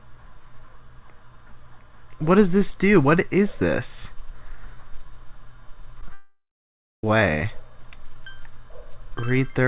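At 6.01 to 6.03 s and again at 6.08 s, short concealed packet loss sets in: about 10 ms of audio each time failed to reach the decoder in time, and the receiver patched the gap by extending the preceding sound before rejoining the real signal, heard as a brief smear or wobble.

From 6.13 to 7.04 s, a long network dropout, likely caused by packets ceasing to arrive, removes about 0.9 s of audio. The receiver carries the last sound on as a fading buzz or hiss for roughly a third of a second, then falls silent for the remaining 0.58 s before the audio resumes with that stretch gone. Throughout, the call path passes nothing above 4 kHz, which fits G.711 A-law at 64 kbps.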